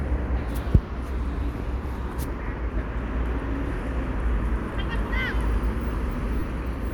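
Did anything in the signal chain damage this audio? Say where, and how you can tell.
Yes. Lost LE Audio frames in the Bluetooth codec stage: a brief noisy smear at 4.39 s and a 30 ms one from 6.40 to 6.43 s, fitting four 7.5 ms frames. The LC3 decoder repeated the last spectrum with random signs, so tones blur into noise rather than dropping out to a silent gap or click.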